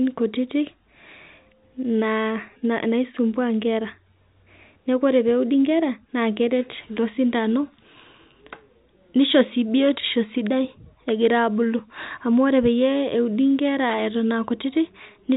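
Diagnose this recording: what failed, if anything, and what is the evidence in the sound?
Nothing failed; the telephone-band speech shows no faults.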